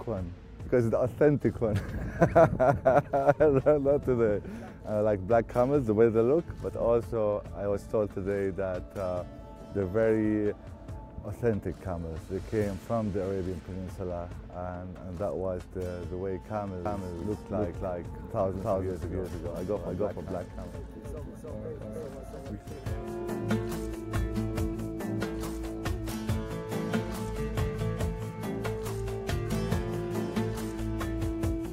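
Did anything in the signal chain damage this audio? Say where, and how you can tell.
Yes. From 16.86 s to 22.52 s there is a doubled audio track: a full-band copy trails by roughly 300 ms at about equal level, without decay or room colour, starting and stopping abruptly. The likely cause is a slower second capture path or misaligned edit.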